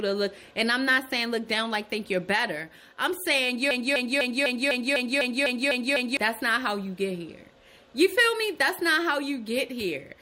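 From 3.71 s to 6.17 s there is a broken-record loop. The player, encoder or stream likely stalled and kept resending the last fragment it held. A piece about 0.25 s long plays ten times in a row, each repeat identical and butted directly against the next, giving a stuttering, mechanical pulse of roughly four cycles per second. Whatever audio belonged in those two and a half seconds never arrives.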